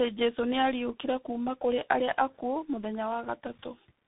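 Rough, muffled and warbly throughout, with nothing above 3.8 kHz: tandem speech coding, where G.723.1 output was decoded and recoded through G.711 into CVSD.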